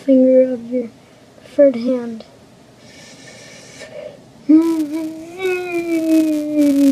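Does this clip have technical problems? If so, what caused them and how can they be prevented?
Yes. Compressed frames skipped at 1.87 to 1.89 s: the audio jumps forward by about two frames, losing roughly 50 ms of sound, because those frames were missing from the file or rejected by the decoder as corrupt. Verifying file integrity after transfer and using error-resilient containers or retransmission prevents this.

Filter restarted on every block, from 4.62 s to the end of the clip: a processing filter discards its internal state at each block boundary and begins again from silence, so every block opens with a small transient. These repeat as a 200 Hz buzz that rises and falls with the loudness of the sound, and the rate points to blocks of about 5 ms each. Keeping the filter's state between successive blocks prevents it.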